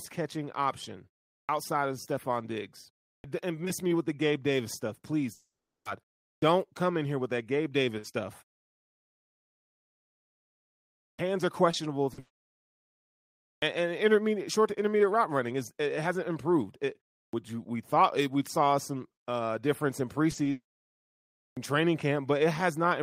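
It's a speech clip with clipped starts after pauses at 1.45, 3.2, 6.38, 11.15, 13.58, 17.29 and 21.53 s. Each one swallows roughly 40 ms of onset because the output device dozes off in the silence and has to wake up again. There are also short concealed packet losses at 11.71, 12.13, 20.31, 20.35 and 20.43 s, brief 20 to 40 ms smears where the receiver carried the last sound forward to patch the gap. The bigger hits are three long network dropouts at 5.33 s (0.52 s, fading to silence), 12.19 s (0.62 s, a stretched buzz all the way through) and 20.51 s (0.32 s, fading out). The likely cause is that audio simply stopped arriving, and the missing stretch is gone when the sound resumes.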